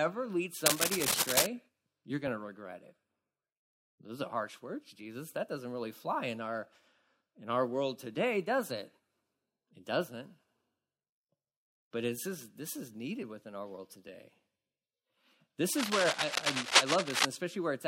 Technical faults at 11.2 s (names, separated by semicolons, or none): none